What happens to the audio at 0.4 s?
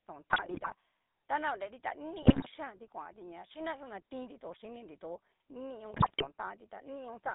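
At 0.4 s the audio is inside a burst of GSM bit errors, running from 0.30 to 0.74 s, just before "tanaonreri ta". Corrupted filter, pitch and gain values produce squawks and pops, which show as smeared, jumping spectral bands and sudden level spikes in the waveform. Underneath, the GSM full-rate codec gives a buzzy, gravelly texture, with the spectrogram showing nothing above about 3.7 kHz.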